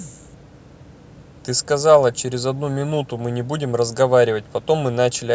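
Nothing goes wrong anywhere in this bit of speech; it has simply been through a call's microphone processing, which trims the deepest bass and leaves nothing above 8 kHz, and that's exactly what such a path should do.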